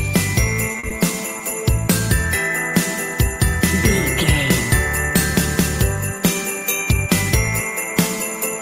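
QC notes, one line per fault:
0.72–0.75 s, 0.79–0.84 s, 0.89–0.91 s, 1.38–1.40 s, 1.50–1.52 s: short concealed packet loss, five brief dropouts in which 10 to 40 ms of audio never arrived in time, the longest at 0.79 s. The decoder bridged each hole by extending the preceding sound, as pitched continuation or shaped noise, then crossfaded back to the real signal. The result is a quick smear or wobble, and a short transient inside a gap can disappear.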